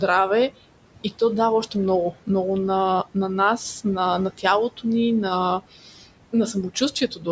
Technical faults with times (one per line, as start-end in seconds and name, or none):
0.00-7.31 noise suppressor artifacts
5.83-6.04 speech cut by the noise suppressor
6.53-7.27 speech cut by the noise suppressor